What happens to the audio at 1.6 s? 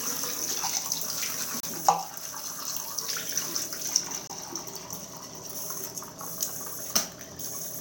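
At 1.60 s the sound drops out for about 31 ms, until 1.63 s. This is a gap at a join of encoded pieces. Separately encoded segments were butted together untrimmed. The encoder's start delay and end padding left brief silence. The edges are smeared by the codec. The sound resumes where it stopped.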